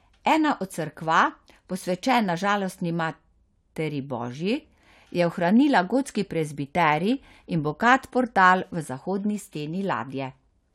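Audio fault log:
No audible faults found anywhere in the speech.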